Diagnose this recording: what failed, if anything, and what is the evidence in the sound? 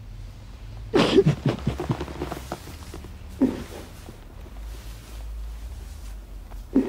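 At 2.93 s the sound abruptly takes on more codec artefacts, with no gap or dropout at the switch, and stays that way to the end of the clip. This is the signature of an adaptive stream at a lower bitrate: when the connection slowed, the player switched mid-stream to a cheaper encoding of the same material. The network stage is the cause, and the codec is where it shows. The step in quality fits a move from roughly 128 kbit/s MP3 down to 64 kbit/s.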